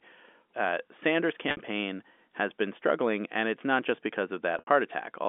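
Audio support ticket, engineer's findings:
Packet loss with pitch repetition, 1.49–1.59 s and 4.59–4.67 s (right after "and it's not just"). About 80 ms lost each time, the first scattered over 100 ms with a 60 ms longest run. The receiver repeats the last pitch period, giving a brief held buzz that fades toward silence before audio cross-fades back. Probable component: concealment on the G.711 A-law telephone leg, where the audio stays within 250 Hz to 3.5 kHz.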